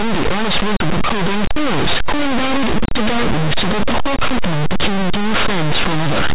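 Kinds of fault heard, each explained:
Linear audio read as companded: The speech was stored as plain linear 8-bit samples, but the player decodes every byte as a mu-law code. Mu-law packs its loudest steps next to the codes that plain audio uses for near-silence. So tiny values just to one side of zero burst out as the largest outputs. Values on the other side stay small. The whole clip becomes a very loud, harsh distortion, loud even in pauses.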